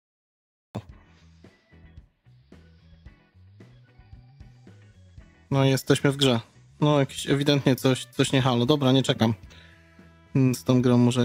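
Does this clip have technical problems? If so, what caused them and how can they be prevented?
Yes. The clip has a cut-off start. It opens with digital silence from 0.0 to 0.75 s. At 0.75 s the sound appears abruptly, already in progress. There is no natural attack and no fade-in. The capture began late, so the onset of this sound was never recorded. What came before it is missing. To prevent this, start recording or streaming a moment before the source begins and keep a short pre-roll.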